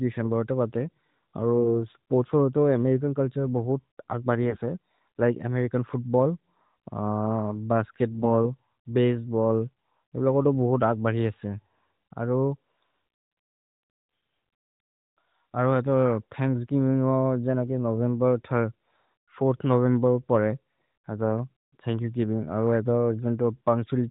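Three short bursts of AMR bit errors, at 1.59–1.69 s just before "स्पोर्त्स् होरो तोह् अमेरिचन्", at 4.41–4.60 s right after "अमेरिचन् चुल्तुरे बहुत् आग्", and at 8.12–8.27 s. A few percent of the weaker-protected frame bits got flipped, so pitch and level hold roughly steady but the speech turns hoarse and gargly.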